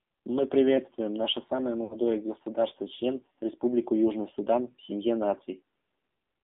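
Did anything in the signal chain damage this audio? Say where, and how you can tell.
Yes, the codec stage for a start. Everything here has been through the AMR narrowband mobile codec, and the damage is plainly audible for the whole clip. The speech sits in a narrow band from roughly 200 Hz to 3.6 kHz, with nothing above it, and it has that buzzy, synthetic edge you get when a vocal-tract model with sparse pulse excitation is running on very few bits. The coarseness fits the low 7.4 kbps AMR-NB mode.

The network stage shows lost AMR speech frames from 1.84 to 2.00 s. For about 60 ms the sound stretches out and sags instead of moving on, which fits three consecutive 20 ms frames failing their checks over the radio link. The decoder kept replaying its last good pitch and spectral settings with falling gain, so you hear a smeared, fading hold rather than a clean dropout, and the speech comes back a bit weak.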